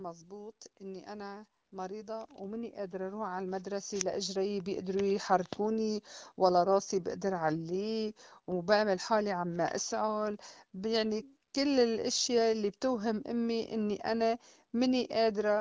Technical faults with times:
0.28-5.63 automatic gain rising

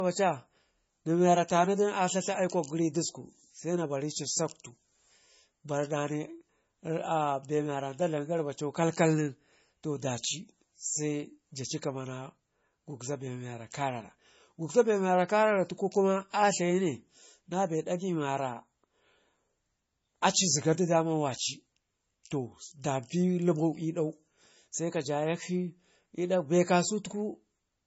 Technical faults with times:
0.00-27.87 low-bitrate audio saved at a high bitrate

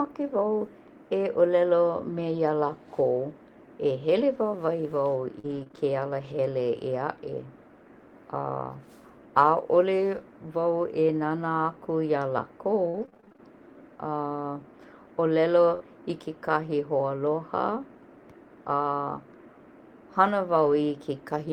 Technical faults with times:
2.09-5.77 scattered short gaps
12.89-15.82 repeated packet loss (robotic sound)
20.62-20.72 lost packet rebuilt from error correction

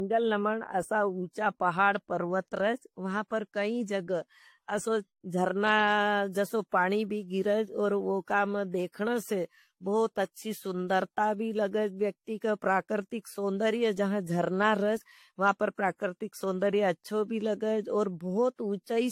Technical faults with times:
0.00-19.12 generation loss

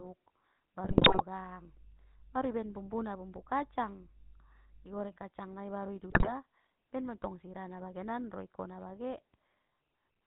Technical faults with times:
0.00-10.27 GSM full-rate codec
0.84-1.22 GSM bit errors
1.36-4.99 mains hum
6.10-6.33 GSM bit errors

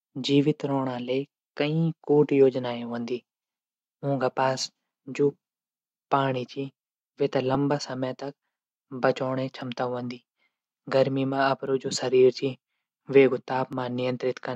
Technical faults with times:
1.37-13.73 clock drift buffer slips

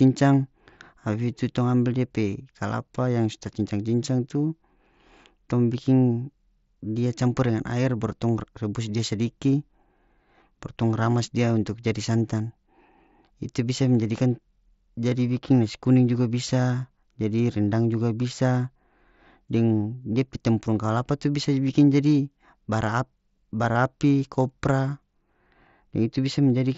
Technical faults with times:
23.73-23.75 concealed Bluetooth headset packet loss

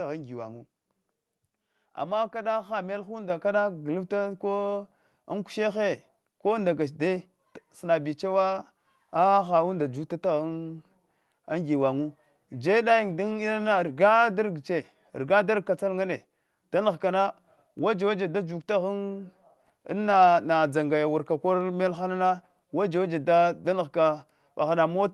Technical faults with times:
3.30 microphone volume stepped up

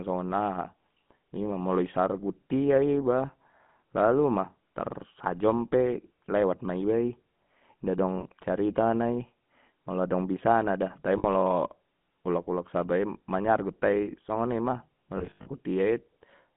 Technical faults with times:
0.00-16.56 GSM full-rate codec
8.20-8.24 lost GSM frames
11.18-11.25 lost GSM frames
15.18-15.47 lost GSM frames

